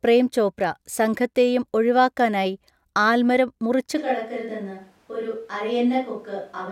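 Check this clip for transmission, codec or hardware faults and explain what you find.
One fault is present. From 3.99 s to the end, the speech abruptly turns roomy and hollow, loses bass, drops about 5 dB, and sits over more background noise, roughly 35 dB below the speech. This is likely a switch to a distant microphone after the close microphone dropped out.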